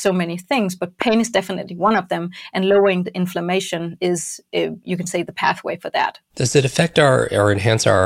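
At 1.02 to 1.04 s, between "many things but" and "is definitely one of", there is a loud pop. It is a single sharp burst, well above the speech level. The speech continues underneath. A sudden voltage pulse, likely from a plug, switch, static or driver glitch, entered the signal.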